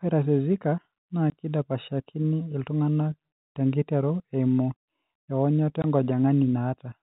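At 1.30 s and from 5.82 to 5.84 s, there is packet loss filled with silence. Each time 20 ms of the stream never arrived, which fits one lost packet, and the receiver played silence instead. The result is a hard-edged gap in the G.711 telephone-band speech.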